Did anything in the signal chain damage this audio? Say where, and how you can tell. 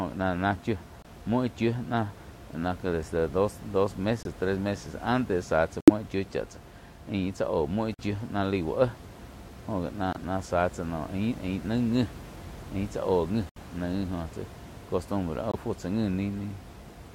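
Yes. Corrupt frame muted, at the codec/decoder stage: abrupt silent holes in the speech at 1.02, 4.23, 5.81 (after "meses antes záh tsá"), 7.94, 10.13, 13.49 and 15.51 s, each 34 to 89 ms long. Damaged compressed frames were rejected and replaced with silence, and the timing stays intact. The room noise, about 16 dB below the speech, is part of the recording.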